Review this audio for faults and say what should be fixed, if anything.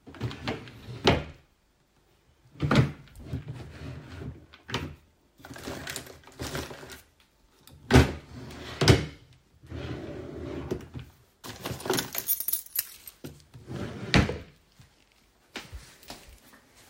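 Nothing needs fixing; no faults are audible here.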